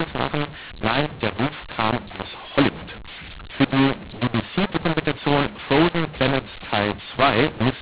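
Throughout the speech, mu-law and A-law are mixed up: audio written with G.711 mu-law coding is read back as A-law. Sample levels come out scrambled, some too large and others too small, giving harsh, distorted speech, while near-silent samples are lifted into audible noise in the pauses.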